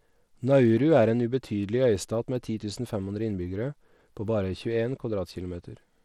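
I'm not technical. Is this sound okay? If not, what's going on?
No. Throughout the whole 6 seconds, the speech has plainly audible damage from squeezing it through a low-quality wireless link, most likely Bluetooth SBC compression. SBC is the basic codec Bluetooth headphones and speakers fall back on. It splits the sound into a few broad frequency slices and has too little data to describe each one properly. Detail gets thrown away, so the speech sounds dull and gritty rather than clean and crisp.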